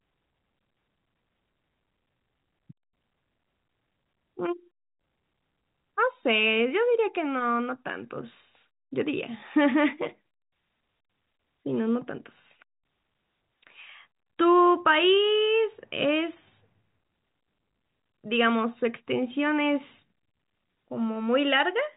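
No technical faults can be heard anywhere in this speech recording. It carries the sound of G.711 telephone coding, with nothing above about 3.8 kHz and the narrow, band-limited character of a fixed-line call.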